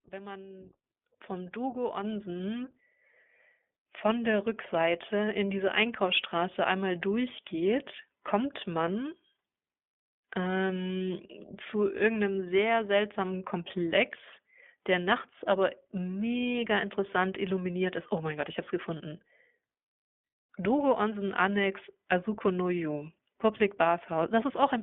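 The whole clip runs through the iLBC codec. The band sits at roughly 200 Hz to 3.5 kHz, and the speech has a plainly rough, synthetic edge, consistent with the 15.2 kbps mode.

At 1.02 s the microphone volume is stepped up by about 9 dB, and at 2.04 s by another 4 dB or so. Voice and background jump together each time as the input gain is raised.

Between 18.98 and 19.01 s there's a lost iLBC frame, about 20 ms worth. The decoder repeats the last pitch cycle as a brief buzzy hold, then recovers straight away.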